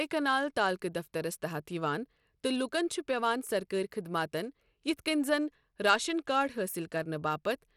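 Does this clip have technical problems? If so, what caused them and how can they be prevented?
Yes. Throughout the speech the top end is dull and unsteady, with nothing at all above 17.2 kHz, and a gritty, grainy noise rides on the sound, plainly audible. This is likely Bluetooth SBC compression. At a low bit allocation, which fits a bitrate around 96 kbps, the codec starves the upper sub-bands and quantises the rest coarsely, leaving the treble cut off and flickering and adding aliasing grit. Record over a wired path or a higher-quality codec such as AAC, aptX or LDAC, or at least raise the SBC bitpool.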